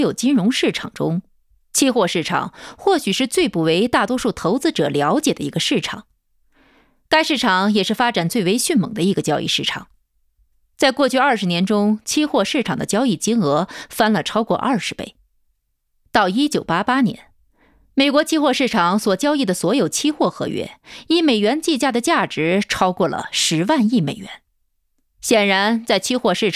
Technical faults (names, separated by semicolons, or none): none